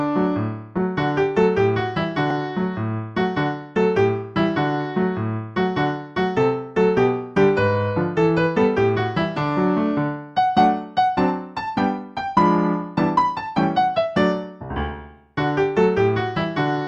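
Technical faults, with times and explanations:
0.77 s and 2.31 s, underrun with held sample: each is a tiny hitch, a brief freeze lasting about 0.73 ms, with only a soft tick as the sound resumes. The output buffer ran dry, and the converter held its last value. That leaves a short flat step in the waveform rather than a drop to silence. The length fits one missing 32-sample block. No audio was skipped: playback continued exactly where it paused, so the rejoin is gentle rather than a sharp click.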